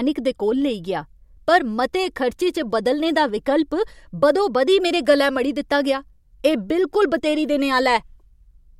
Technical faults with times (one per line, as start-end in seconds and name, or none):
none